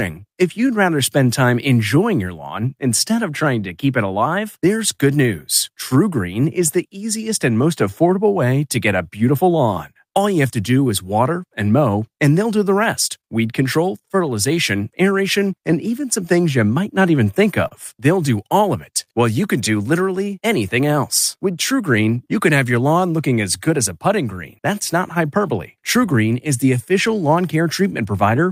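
Clock drift between sender and receiver runs through the whole speech clip: the sender's clock is about 3% slow, so the receiver's buffer keeps draining. Repeated timing corrections from 0.2 s to 28.4 s stretch the speech to 98% speed, adding roughly 0.7 s by repeating short pieces, heard as a slightly dragging, uneven tempo. Scattered short gaps appear between 3.61 and 6.71 s (about four, up to about 40 ms), between 9.75 and 13.26 s (about three, up to about 30 ms), and between 17.35 and 22.18 s (about five, up to about 30 ms). Each is bridged by extending the preceding sound, leaving brief smears or ticks.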